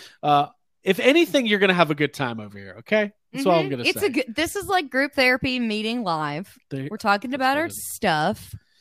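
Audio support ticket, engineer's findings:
Listened through the full recording and nothing stood out; no finding to log against any component.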